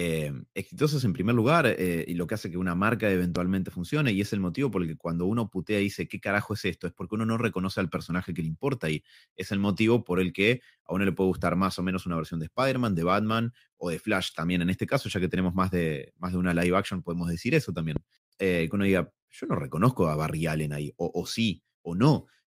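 Two loud pops cut in, at 3.36 to 3.38 s and again at 17.96 to 17.99 s. Each is a single sharp crack landing well above the speech, which carries straight on underneath. A sudden voltage spike from a plug, switch or static discharge is the likely culprit.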